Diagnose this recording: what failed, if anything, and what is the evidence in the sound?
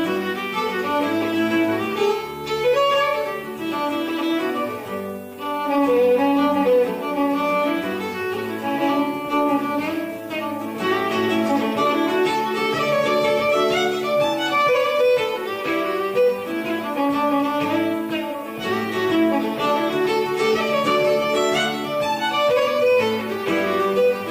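A steady, thin hiss rising toward the band's top runs throughout: low bit depth with noise shaping at sample-format conversion, 8-bit rounding error pushed upward.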